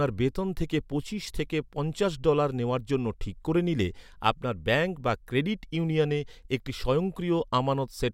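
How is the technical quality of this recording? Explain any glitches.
The technical quality of the recording is sound, with no glitches to explain.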